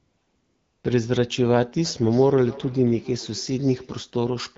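AMR comfort noise fills the opening from 0 to 0.83 s. The phone judged the talker silent and sent no speech frames for that stretch, so the receiver substituted a smooth, steady synthetic hiss, built from a rough level and spectrum estimate, in place of the real background.

Feedback echo between two devices runs from 1.85 to 4.13 s. A second device on the same call replays this speech, and the microphone recaptures it, outside reach of the echo canceller. Each word returns roughly every 0.3 s, thinner and ringing, peaking about 18 dB below the speech.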